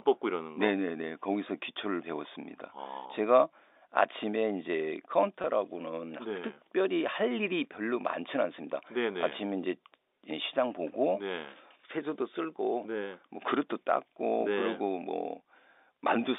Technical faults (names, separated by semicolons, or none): packet loss with pitch repetition